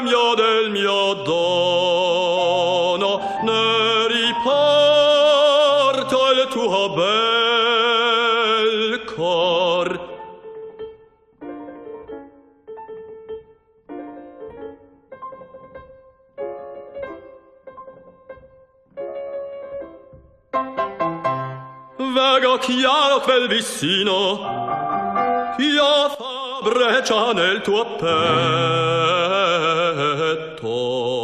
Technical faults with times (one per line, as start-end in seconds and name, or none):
10.57-10.64 short stall from a late packet
26.15-26.62 sudden gain jump